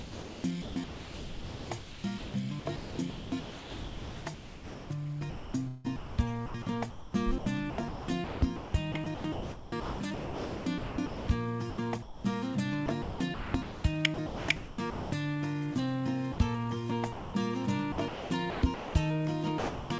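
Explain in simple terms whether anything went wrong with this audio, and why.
Sound chopped by the voice detector runs from 0 to 12.24 s, 12.86 to 15.12 s, 17.92 to 18.94 s and 19.58 s to the end. The sound keeps cutting in and out. The likely cause is the sender's voice detector switching repeatedly and filling gaps with comfort noise.

Sound dropped by the voice detector happens at 16.32 to 16.38 s and 17.12 to 17.34 s. Each is a single short gap where steady noise or near silence replaces the sound before it returns. This is likely the detector briefly mistaking quiet sound for background. The difference from chopping is one clean gap rather than repeated switching.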